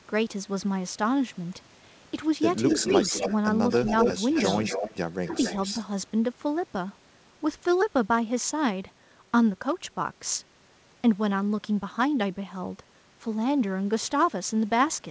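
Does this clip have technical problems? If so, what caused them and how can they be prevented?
Yes. Echo leak appears at 2.68–3.35 s, 3.7–4.14 s, 4.32–4.96 s and 5.25–5.85 s. A copy of the speech returns about 255 ms late, from near full level down to about 10 dB below it. On a spectrogram it shows as repeated harmonic patterns offset by a quarter second. The likely cause is a far-end echo canceller that failed to remove its loudspeaker pickup. Better canceller tuning, a headset, or a lower speaker volume would prevent it.

Speech suppressed in double talk occurs at 5.27–5.35 s, where the echo and the talker overlap. The level drops by roughly 10 dB, which shows as a brief notch in the waveform envelope. This likely comes from the canceller attenuating both signals at once. A canceller with better double-talk detection would prevent it. The G.722 call path limits content to 8 kHz throughout.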